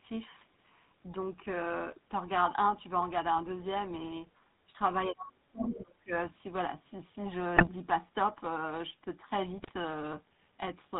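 Across the whole recording the speech has a buzzy, gravelly roughness, with nothing above 4 kHz. That is the GSM full-rate codec at 13 kbps, which rebuilds the vocal tract from coarse pulse excitation and throws away fine detail and the upper band.

At 4.66 s the speech dips briefly by around 10 dB. From 5.07 to 6.12 s it falls away much further, by roughly 30 dB, for about a second. This is likely speech suppressed in double talk: an echo canceller that cannot tell the talker from loudspeaker echo turns the talker down while the far end speaks.

Inside that gap, from 5.66 to 5.80 s, a second voice comes through at about the same level as the main speech. It is likely the other side's voice leaking through, where far-end audio played on the talker's loudspeaker reached the microphone and was not fully cancelled.

From 7.56 to 7.69 s and again from 9.58 to 9.72 s the speech breaks into squawks, pops and a gargling texture across a handful of frames. 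These are GSM bit errors. Corrupted filter, pitch and gain values from a badly degraded radio link warp the spectrum and spike the level, which fits an error rate of a few percent.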